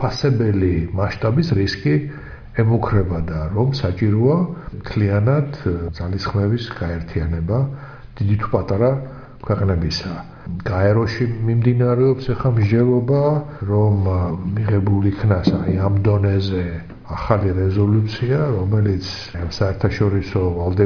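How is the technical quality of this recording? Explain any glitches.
No technical glitches are audible.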